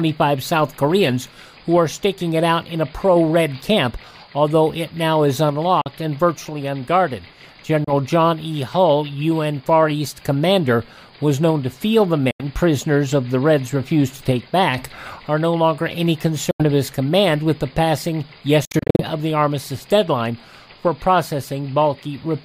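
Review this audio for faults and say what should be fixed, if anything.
Short silences at 5.81–5.87, 7.84–7.92, 12.31–12.44 and 16.51–16.63 s, plus a cluster of brief gaps from 18.65 to 19.02 s, point to a likely Bluetooth dropout: late wireless packets were discarded. Unlike an edit cut, the sound resumes as though it had kept playing. To prevent it, keep the headphones close to the source and away from competing 2.4 GHz traffic.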